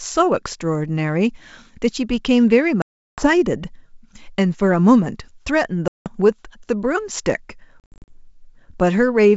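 A speech clip carried over wideband G.722 telephone coding, which sounds clean, shows packet loss on an ADPCM call three times. Hard silent holes cut in at 2.82–3.28 s (360 ms lost) and 5.88–6.11 s (180 ms). At 7.80–8.11 s the loss is broken up, about 200 ms of gaps scattered over 280 ms, none longer than 60 ms. After each gap the decoder's predictor and step size no longer match the sender's, so speech resumes slightly distorted before settling.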